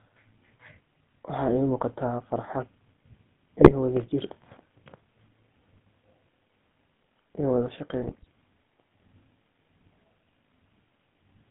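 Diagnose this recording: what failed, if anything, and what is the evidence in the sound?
The speech passed through the GSM full-rate codec, and the roughness throughout points to its 13 kbps coding. The codec rebuilds the speech from a vocal-tract filter driven by a thinned pulse excitation, which leaves a buzzy, gravelly edge. The band runs from 150 Hz to 3.5 kHz.

GSM bit errors struck the radio link twice, corrupting the decoder's filter, pitch and gain parameters. From 3.58 to 3.72 s, just before "wadha jir", and from 8.01 to 8.26 s, just after "iyo wadha", the speech breaks into squawks and gargling as frames decode with bent spectra and jumping levels.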